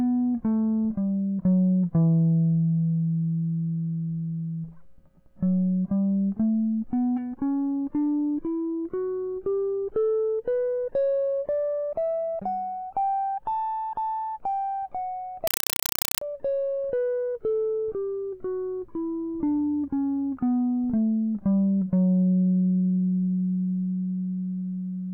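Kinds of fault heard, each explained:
Compressed stream played as audio: the music becomes loud, chattering static of undecoded data, shown on the waveform as 4 ms noise bursts 31 times a second with flat gaps between.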